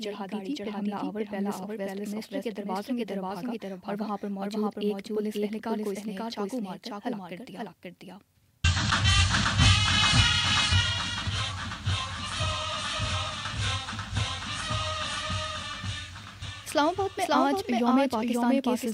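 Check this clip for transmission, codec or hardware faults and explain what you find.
One fault runs through the whole clip: a doubled audio track. A second, full-band copy trails about half a second behind at roughly equal loudness, likely from the audio being captured twice over a slower path. Unlike room echo, the copy never decays or gains reverberant colour.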